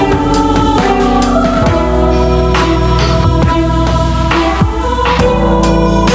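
Gain pumping runs through the whole music clip: the level keeps breathing, ducking by around 5 dB under each loud hit, so loud and soft passages sit closer together and the sound feels squashed. The likely cause is input gain set far too high, with a fast limiter or compressor clamping down on every peak. On a waveform the envelope looks flattened, with the quiet gaps rising toward the peaks. The spectrogram shows nothing above 8 kHz, which is consistent with the call microphone processing in the chain.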